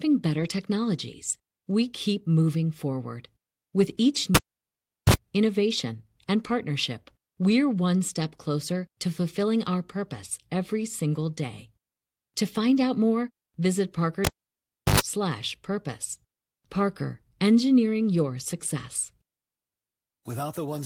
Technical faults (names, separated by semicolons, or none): lost packet rebuilt from error correction; cable pulled and plugged in